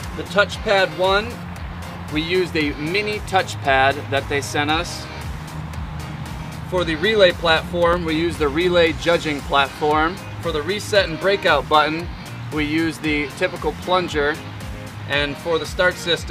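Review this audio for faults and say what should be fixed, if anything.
A scratch or blemish on the disc damaged more data than the player's error correction could rebuild, and the fault came back once per revolution. These are CD scratch ticks. The player patched each bad stretch by interpolating or muting it, which leaves five short ticks between 7.49 and 8.38 s. They come at roughly five or six per second, and the longest lasts only a few milliseconds. Prevent this by cleaning or resurfacing the disc, or by re-ripping it with a secure, error-checking ripper.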